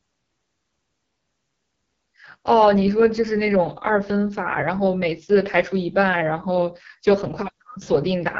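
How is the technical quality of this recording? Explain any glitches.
The recording takes a real hit from heavy coding damage that runs the whole way through, and it's the AMR wideband (HD Voice) codec at work. There's nothing above about 7.5 kHz, and the speech has that rough, raspy grain you get when the codec is squeezed hard, which fits its lowest 6.6 kbit/s mode. At that rate the pulse-driven vocal tract model can't track the voice finely, so it sounds gritty, and the top band is just shaped noise standing in for real detail.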